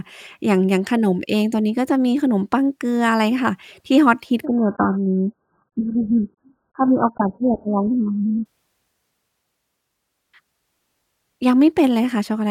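An adaptive stream at a lower bitrate takes over this speech clip from 4.45 s to 8.45 s. Without any gap, the sound suddenly loses all content above about 1.7 kHz and turns dull and smeared with codec artefacts. That is consistent with the player dropping from a stream near 96 kbit/s to one near 8 kbit/s while the connection slowed. At 8.45 s the full treble returns just as abruptly once the higher-quality stream resumes.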